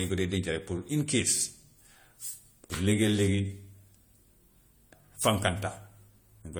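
A speech recording with generation loss throughout its full length. The sound is swirly and hollow. Consonant onsets are blurred and smeared. Small holes and a watery noise sit in the spectrum. This is more damage than a single pass at this quality would leave. Content still reaches up to 20 kHz. The likely cause is repeated lossy coding: decoded and re-encoded around four times through AAC-LC, at a rate that fits 64 kbit/s. Each pass quantised on a shifted frame grid, so the errors stacked.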